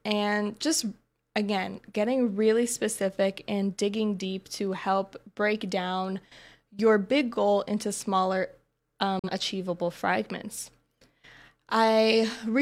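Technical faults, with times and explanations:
9.19–9.30 s, digital broadcast dropout: The speech fades to silence in about 3 ms and returns at 9.30 s. The receiver muted after losing a frame. About 43 ms of sound is gone, which fits a single lost frame. That material cannot be recovered.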